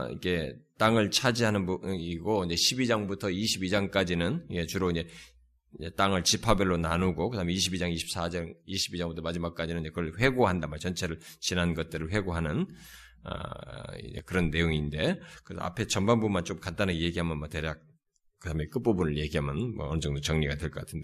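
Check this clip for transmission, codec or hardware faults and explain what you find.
One fault is present. From 14.19 to 14.32 s, the speech abruptly drops by about 6 dB. One channel likely drops out, leaving only half the mono sum.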